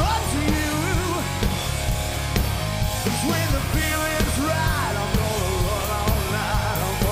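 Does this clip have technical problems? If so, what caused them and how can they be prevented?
No, no technical problems heard.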